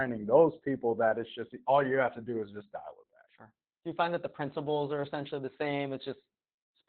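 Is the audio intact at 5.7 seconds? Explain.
No. Opus voice compression runs through the whole clip, including 5.7 s. Its linear-prediction coder, apparently at a narrowband low rate near 8 kbps, leaves speech heavily muffled and hoarse. A spectrogram shows nothing above 4.5 kHz and smeared, coarse harmonics.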